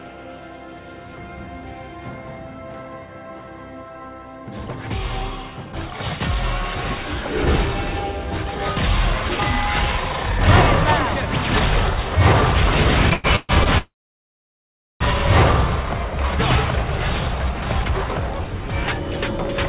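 Audio carried over a call link, band-limited with nothing above 4 kHz, which fits a narrowband G.711 A-law path. From 13.1 to 13.69 s it catches and stutters in repeated stalls: four short gaps, the longest 130 ms, stretch nearly half that span as the receiver extends the last sound while late packets leave its jitter buffer empty. At 13.78 s a call audio freeze begins: the sound hangs, decays, then falls silent for about 1.1 s before resuming at 15.03 s, likely because delayed packets drained the buffer, inserting a gap without losing content. From 16.76 s to the end, a jitter buffer speed-up makes the audio run about 14% fast at unchanged pitch, sounding hurried, as the receiver trims pitch-period slices totalling roughly 0.4 s to shed the backlog.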